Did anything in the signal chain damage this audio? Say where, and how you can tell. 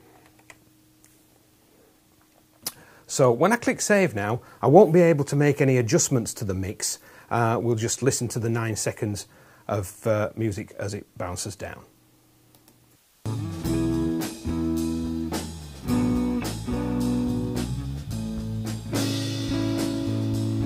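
No, nothing stood out on listening that would point to damage at any stage of the chain.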